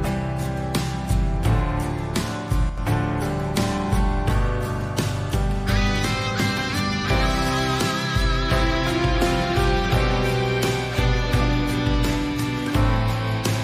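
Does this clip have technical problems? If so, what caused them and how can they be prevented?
Yes. From 2.70 to 2.78 s, one channel drops out: shared content falls abruptly by about 6 dB while anything unique to that side vanishes, unlike a full dropout to silence. The likely cause is a loose stereo cable or connector. Securing connections and monitoring both channels prevents it.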